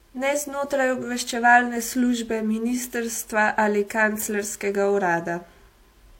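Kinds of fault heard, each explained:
Transcoding between lossy codecs: likely an HE-AAC encode re-encoded as WMA 1, so both codecs' artefacts layer throughout the speech, with nothing above 16.3 kHz.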